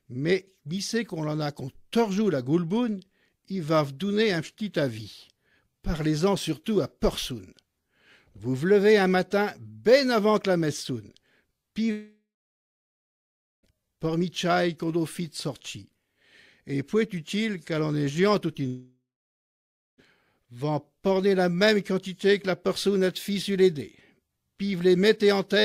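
Long network dropouts at 11.91 to 13.66 s and 18.67 to 20.01 s: each starts with the last sound smeared into a fading buzz or hiss, then about 1.4 s and 1 s of silence, before the audio resumes with the gap skipped. The likely cause is the stream ceasing to arrive while the receiver briefly extended the final sound.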